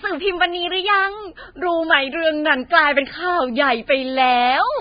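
A speech recording whose whole length shows the marks of heavy lossy coding, most likely Vorbis compression at a very low quality setting. The encoder appears to have kept only a coarse spectral outline and spent almost nothing on the residue above it, which fits a bitrate of around 14 kbps. Nothing survives above 4.9 kHz, so the speech sounds dull and band-limited, and the remaining treble is quantised into a grainy, hissy wash that roughens voiced sounds and softens consonant onsets. A drift correction step then occurs between 1.94 s and 2.66 s: clock-matching software has apparently changed the playback rate abruptly, likely to rebalance a buffer, slowing the audio by about 6% for that stretch. Because speed and pitch move together, the voice drops by 111 cents, slightly more than a semitone, sounding suddenly lower and draggier before snapping back to its normal pitch and pace.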